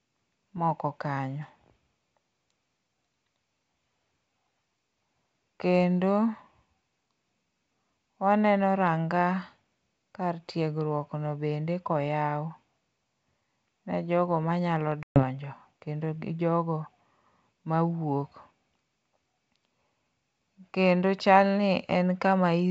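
At 15.03 s an ADPCM call loses packets, a gap of about 130 ms that fits a burst of around fifteen packets. Silence fills the hole, leaving the decoder's predictor and step size out of step with the sender's. The G.722 wideband speech resumes around 15.24 s with an abrupt edge, slightly distorted before it settles.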